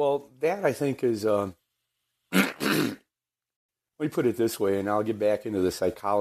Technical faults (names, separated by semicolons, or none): AAC frame loss with muting